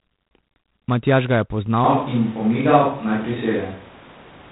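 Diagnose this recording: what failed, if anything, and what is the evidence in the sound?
A harsh, rasping hiss rides on the speech for the whole clip, rising and falling with its level, and nothing above 3.9 kHz is present. This is G.726 ADPCM damage at the codec stage. The coder sends only a few bits per sample describing the error of an adaptive predictor, so quantisation noise tracks the signal. The strength of that grit points to the 24 kbit/s mode, which keeps three bits a sample, rather than the 32 kbit/s DECT setting.

From 1.84 s to the end, the sound abruptly turns roomy and hollow, thinner in the bass, with background noise now sitting roughly 25 dB below the speech. The overall level hardly changes. This is a switch to a distant microphone, at the capture stage. The sudden change with no return most likely means the close microphone's feed dropped out or was left out of the mix, and a more distant pickup carried the rest.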